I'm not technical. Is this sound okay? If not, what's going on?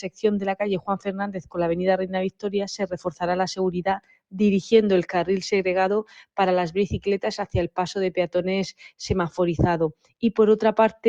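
No. A noise suppressor applied to music or sounds was left switched on. It was designed for speech, so it mistakes steady tones and lingering echoes for background noise and keeps turning them down. The whole clip pumps and thins out as the level rises and falls.

The worst moments are sound cut by the noise suppressor, at 0.0 to 0.21, 0.8 to 1.57, 2.31 to 2.5, 2.83 to 3.22, 3.98 to 4.38, 7.45 to 7.77 and 9.93 to 10.23 seconds. At those points held or fading sound drops away sharply or stops early, while sudden hits still come through.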